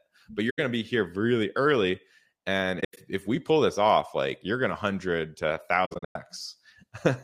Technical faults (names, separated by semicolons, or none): AAC frame loss with muting